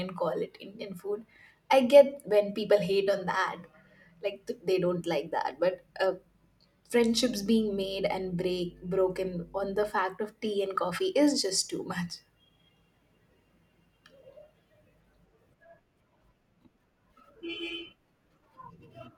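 It's a speech recording with a stretch of mains hum from 7.0 to 9.91 s: a steady low drone at 50 Hz sitting roughly 25 dB under the speech. That's the power line leaking into the signal path, most often through a ground loop or a transformer sitting too close to the cabling.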